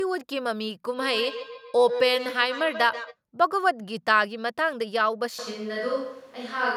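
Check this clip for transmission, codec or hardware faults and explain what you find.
Two faults are present: a feedback echo between two devices, and a likely switch to a distant microphone near the end.

From 0.90 to 3.17 s there is a feedback echo between two devices. A second device in the same room on the same call plays back what this microphone sent, and the microphone picks it up again. The local echo canceller only removes what its own device plays, so it ignores that sound. Each word returns roughly every 150 ms, thinner and ringing, peaking at about 8 dB below the speech.

From 5.39 s to the end, the speech suddenly turns roomy and hollow with less bass, though its level stays about the same. Background room noise comes up to around 30 dB below the speech. This sudden change is most likely a switch to a distant microphone, with the close microphone's signal failing or being dropped and a farther one, such as a camera's, taking over and capturing more of the room.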